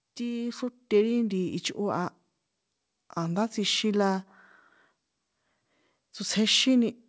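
From 0.17 to 2.17 s, automatic gain rising lifts speech and background together by about 5 dB as the gain control compensates for a quiet input; content stops at 8 kHz.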